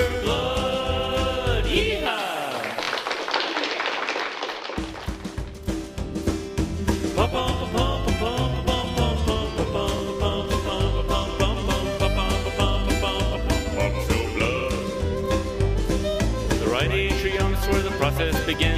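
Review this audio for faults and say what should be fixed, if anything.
Repeated buffer at 2.83 s, 9.99 s and 17.58 s. A 23 ms chunk replays with hard joins: twice at 2.83 s, once at the others, fitting a 1024-sample buffer. Late-arriving audio caused it. Enlarge the playback buffer or ensure the feeding process keeps up.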